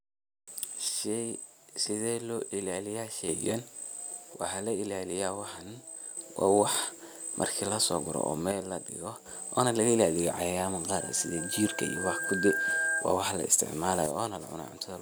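At 0.89 s the speech level falls abruptly by about 6 dB and stays down until 3.29 s. The same drop returns from 4.34 to 6.17 s, and from 8.52 to 9.26 s, just after "so gaathoh oo". It comes back once more at 14.06 s and lasts to the end. The likely cause is one channel drops out. The mono sum keeps only half of what both channels shared. Anything carried by the missing side vanishes.

From 11.00 to 13.06 s there is a loudspeaker feedback squeal. It begins just after "ilaliyah cayayama". A microphone is picking up the speaker it feeds. At 1.6 kHz the loop gain goes above one, so that tone feeds itself. It swells over about a second and a half until it is roughly as loud as the speech. It breaks off before "wa wax la".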